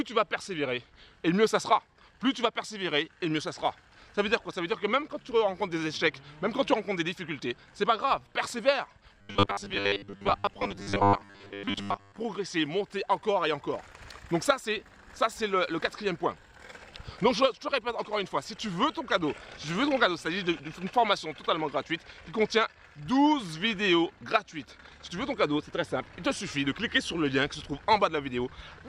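Robotic sound from repeated short buffers runs from 9.21 to 12.21 s. A rigid, metallic buzz at 100 Hz covers the sound for those three seconds, loosely tracking its shape. The likely cause is new audio arriving too seldom. The playback repeats the last stretch, about 10 ms given that 100 Hz pitch, rather than going quiet, and most of the real material in that window is skipped.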